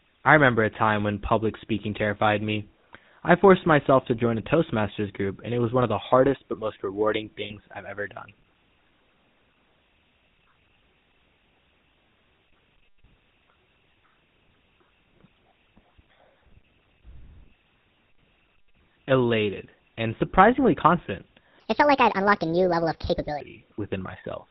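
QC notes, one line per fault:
Throughout: GSM full-rate codec. The whole recording has the buzzy, gravelly grain of a vocal-tract model excited by regularly spaced pulses, with nothing above 4 kHz, which fits a 13 kbps GSM link. Unlike plain band-limiting, the roughness is built into the voice itself and is plainly audible.
7.44 to 7.53 s: lost GSM frames. Right after "hardest but most rewarding", the sound hangs for about 60 ms as a rough, metallic ring before "I've ever done" resumes, which fits three consecutive frames lost. The last good frame is repeated, so this is a held tone rather than silence or a click.
21.60 to 23.40 s: section at the wrong speed. After "and surprisingly confident", about 1.8 s plays 1.5 times too fast, with the voice turning hurried and roughly seven semitones higher, likely from playback against the wrong clock. Pitch and tempo rise together, which separates it from a pitch shift with the timing kept.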